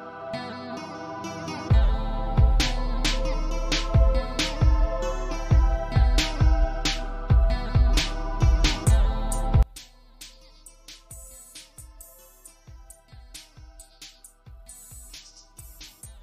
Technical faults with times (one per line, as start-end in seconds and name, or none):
9.63-16.23 one channel inverted